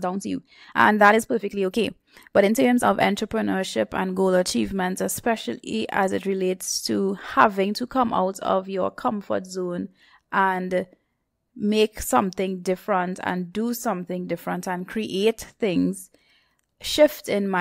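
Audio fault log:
0.00–2.84 s: time-stretched section. The opening runs about 1.39 times faster than the rest of the speech while its pitch stays unchanged, so the pace jumps abruptly once it ends, just before "entrepreneurship and goal achievements". The likely cause is software squeezing this stretch to fit a shorter length, cutting out short slices of the waveform to hold pitch steady. Those removed pieces leave the passage sounding rushed.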